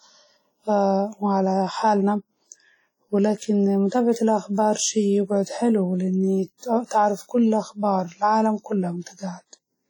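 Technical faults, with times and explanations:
Throughout, WMA compression: a ringing, washy texture with hiss that swells and fades with the sound, likely heavy low-bitrate WMA 1 coding, around 32 kbps, rather than steady broadband noise.
3.88 to 3.92 s, 6.58 to 6.62 s, 6.86 to 6.91 s, pre-echo: a short hiss of 39 to 50 ms arrives just before sharp attacks, as transform-block quantisation noise leaks backwards, unlike reverb, which trails afterwards.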